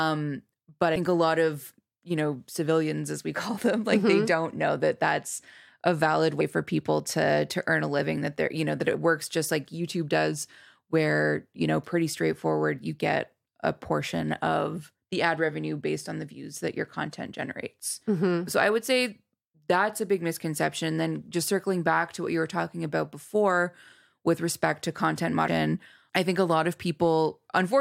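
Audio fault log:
0.96 s, 6.40 s, 8.94 s and 25.47 s: damaged data in a compressed stream. At each point a short stretch of the encoded speech is corrupt, so the decoder cannot read those frames, loses its place in the stream and has to search for the next valid frame header before it resumes. Each event is a very brief chirp or blip, roughly 12 to 18 ms long, that breaks into the speech and then stops.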